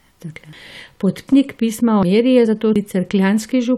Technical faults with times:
0.53 audio missing between chunks
1.28 audio missing between chunks
2.03 audio missing between chunks
2.46 damaged data in a compressed stream
2.76 audio missing between chunks

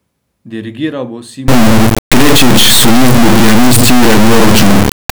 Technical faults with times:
1.48-5.16 integer read as float

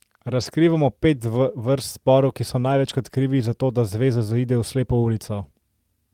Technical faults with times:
0.41-0.43 lost packet rebuilt from error correction
2.67-2.73 lost packet rebuilt from error correction

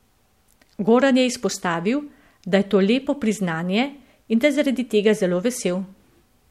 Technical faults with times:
none

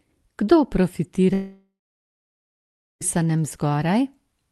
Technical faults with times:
1.33-3.03 long network dropout

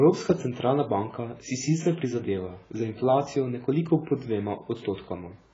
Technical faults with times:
0.00-5.54 AAC compression

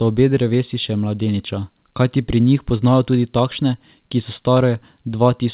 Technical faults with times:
none

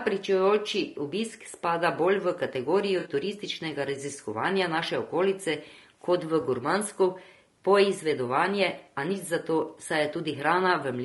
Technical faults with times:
0.00-11.04 low-delay AAC compression
2.99-3.09 AAC frame loss with concealment
6.41-6.44 AAC frame loss with concealment

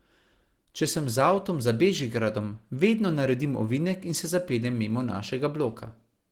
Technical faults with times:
0.00-6.32 Opus compression

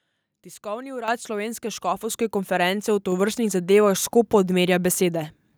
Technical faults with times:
1.08 microphone volume stepped up
2.10 microphone volume stepped up

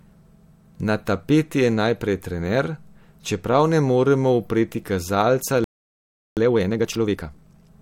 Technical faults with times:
5.64-6.37 playback stall
6.37-7.71 time-compressed catch-up

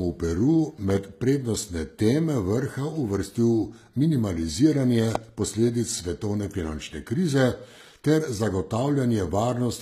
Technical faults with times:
0.00-9.82 HE-AAC compression
0.90-0.99 loud pop
5.15-5.17 loud pop

